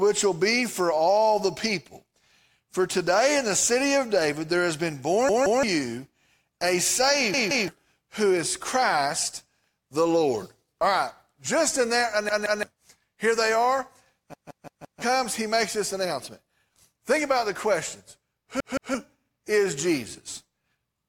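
Repeated buffers occur at 5.29 s, 7.34 s, 12.29 s, 14.34 s and 18.60 s. Fresh audio failed to reach the output in time, so the device replayed its last 171 ms block, which fits an 8192-sample buffer. Each time the speech stutters, with the same fragment heard three times over about 0.34 s and hard joins between copies. At 14.34 s it repeats five times, up to 15.02 s. Roughly a third of a second of speech is skipped after each stutter, and about 0.7 s after the long one.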